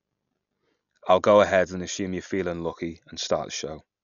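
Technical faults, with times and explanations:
Throughout, likely Dolby Digital compression: nothing above 7 kHz, and rough fluttering noise where starved frequency lines are filled with dither, consistent with a bitrate around 48 kbps.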